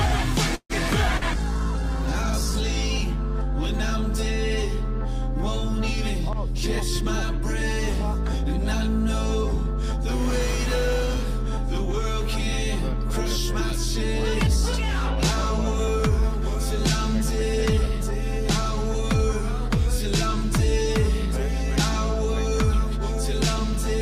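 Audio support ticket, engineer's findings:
Call audio freeze, 0.55–0.73 s. The last sound is held as a decaying buzz or hiss, then about 70 ms of silence, and playback resumes exactly where it stopped. Likely packets stalled in transit and the jitter buffer ran dry. The receiver stretched the tail, inserting roughly 141 ms of gap and latency without discarding audio.

Call bitrate drop, 1.02–2.71 s. The sound turns muffled and watery, with the top end gone, for about 1.6 s at the worst point before clarity returns. The bandwidth estimate collapsed and the encoder went from 96 kbps to 13 kbps. Opus then quantised coarsely and low-passed the signal until the rate recovered.

Short concealed packet loss, 1.18–1.24 s, inside the degraded stretch. A brief smear or wobble replaces about 40 ms of real audio. Packets missed the decoder deadline, so the receiver extrapolated from the preceding sound and crossfaded back into the decoded stream.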